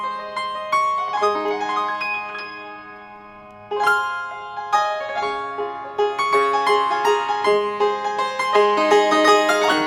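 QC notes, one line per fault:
Throughout: audio read two samples at a time (double speed). Each pair of samples was taken as a single frame, so playback runs at 2x speed and sits 12 semitones, a full octave, higher.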